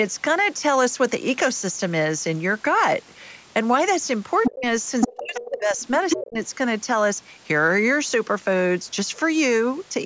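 From 4.42 to 4.51 s a second voice, about as loud as the talker, leaks through: other side's voice leaking through, likely a residual loudspeaker echo the canceller missed. At 4.49 to 4.65 s the talker drops by roughly 30 dB, speech suppressed in double talk, likely the canceller ducking both voices at once. The same pairing returns: leakage at full level from 5.01 to 5.5 s overlaps a dip of around 20 dB lasting about 0.7 s (5.07 to 5.78 s). A faint echo scrap follows at 5.8 to 5.87 s. Then leakage from 6.09 to 6.2 s precedes the deepest cut, roughly 40 dB, from 6.16 to 6.38 s. The call microphone processing, with nothing above 8 kHz, is not a fault.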